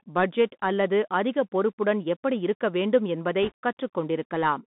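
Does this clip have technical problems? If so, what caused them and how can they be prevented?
Yes. Throughout, the speech has gone through a Bluetooth CVSD headset codec, the narrowband link that sends one up-or-down bit per sample and adapts its step size. The band sits at roughly 150 Hz to 3.6 kHz, which fits a 64 kbps CVSD link, so everything above is gone. Fast, loud rises outrun the step, s sounds turn scratchy, and a granular hiss sits under the speech. To prevent it, record through a wideband headset profile or a wired microphone.

From 3.43 to 3.52 s, just after "பொறுப்புடன் எப்படி இருக்க வேண்டும்", there are bit errors on a Bluetooth voice link. Bits flipped in transit at a rate of a couple of percent. Because each CVSD bit nudges the waveform by only one small step and the error fades as the step size adapts, there is no loud click. Instead, that stretch gets a brief rushing, crackly noise over the speech. 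To prevent it, keep the headset close to its host and away from 2.4 GHz interference.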